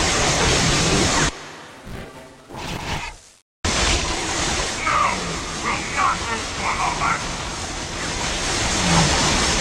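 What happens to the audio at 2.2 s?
At 2.2 s the sound carries a 172 Hz buzz and rushes ahead about 1.88 times faster at roughly normal pitch, from 1.70 to 3.03 s. This is a block size mismatch (truncated): a downstream stage reads shorter blocks, which fits a 256-sample read, and discards each block's tail.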